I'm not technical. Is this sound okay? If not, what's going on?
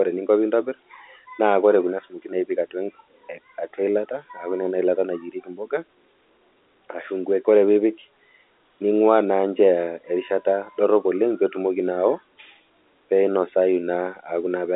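Yes, nothing is wrong with the signal; it is ordinary telephone-line speech, so it sounds narrower than a studio recording, with the highest sounds cut off around 3.8 kHz, just as any normal phone call would.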